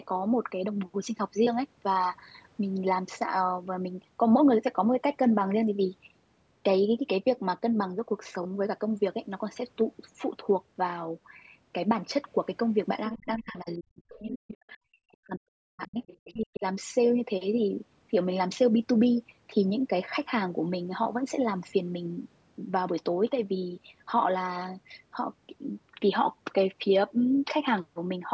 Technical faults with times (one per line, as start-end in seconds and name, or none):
13.10-15.98 speech suppressed in double talk
14.34-14.57 other side's voice leaking through
16.07-16.33 other side's voice leaking through
16.25-16.64 speech suppressed in double talk